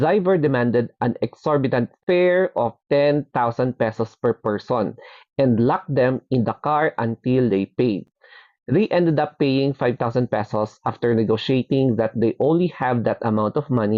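At 2.03 to 2.07 s the sound stops dead for about 39 ms, and at 8.07 s a shorter hole of about 10 ms appears. These are gaps between stream segments: two consecutive pieces were timed slightly apart, and the player filled the space with silence. The two holes fall 6 s apart, which fits segment boundaries. Unlike a dropout, nothing is missing. The audio resumes exactly where it stopped, so the gap adds time rather than removing material.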